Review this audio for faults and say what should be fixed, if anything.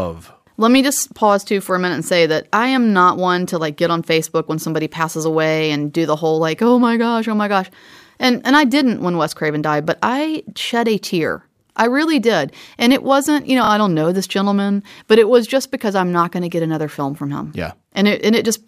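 Repeated frames at 13.64 to 13.69 s, between "it wasn't you know" and "I don't know this", cause a brief stutter. A 26.1 ms block, which points to a single compressed frame, plays twice more and adds 52.2 ms. A spectrogram shows the same narrow slice three times in a row, and the waveform shows one short segment copied back to back. Preventing this means the encoder or transport must write and send each frame exactly once, with sequence checks that drop duplicates.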